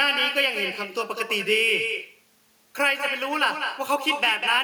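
Speech with echo with no canceller throughout: a copy about 6 dB quieter trails each phrase by roughly a fifth of a second, showing as a fainter, duplicated waveform and smeared, repeated spectrogram bands.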